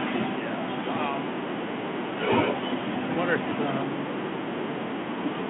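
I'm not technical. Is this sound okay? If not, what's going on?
Yes, this speech carries no technical faults, and it comes across with the narrower, telephone-like sound of an ordinary phone line.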